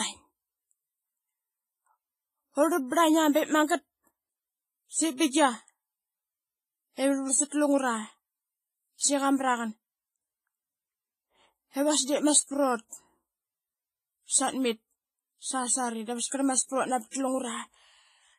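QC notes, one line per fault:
Throughout: WMA compression. The speech rings and sounds washy, with a hiss that swells and fades with the signal and nothing above 15.3 kHz. This is likely heavy long-block transform coding near 24 kbps. Unlike steady background noise, this hiss follows the speech.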